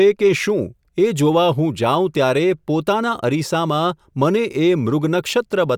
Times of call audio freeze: none

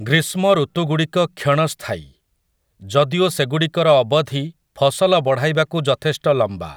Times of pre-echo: none

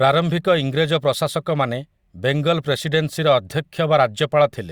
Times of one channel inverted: none

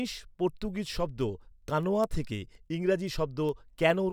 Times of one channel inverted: none

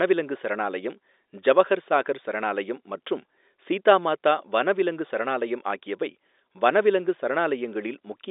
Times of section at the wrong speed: none

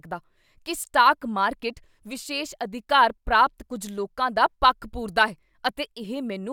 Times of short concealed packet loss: none

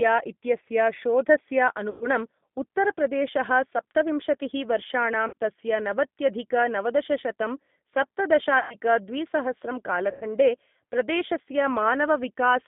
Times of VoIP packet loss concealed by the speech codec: 1.90-2.07, 5.28-5.34, 8.59-8.76, 10.11-10.25

